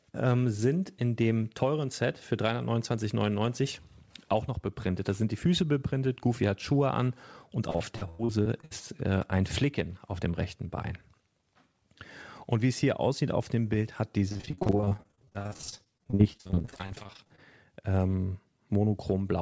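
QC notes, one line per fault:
7.70–8.72 s, repeated packet loss (robotic sound): eight quick dropouts, the longest about 94 ms, each papered over by stretching the last bit of sound, so roughly a third of the span turns choppy.
14.28–17.40 s, repeated packet loss (robotic sound): dozens of short holes, none over about 46 ms, patched back-to-back with repeated sound, covering about 41% of the span. That's a choppy texture with pieces missing.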